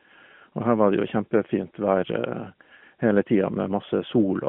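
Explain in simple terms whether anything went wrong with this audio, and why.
Nothing went wrong: the speech runs over an AMR narrowband mobile codec link, which passes only about 150 Hz to 3.4 kHz, so the thin phone-call sound is expected behaviour, not a fault.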